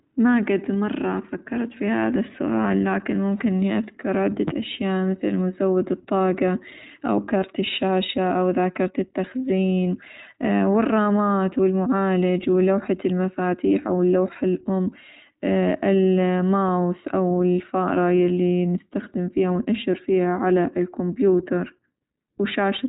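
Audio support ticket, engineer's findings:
Speech rough and slightly synthetic throughout; nothing above 3.8 kHz. Probable component: iLBC codec, likely 15.2 kbps 20 ms mode. Each frame's excitation coded independently at narrowband, so coarse detail and missing top end.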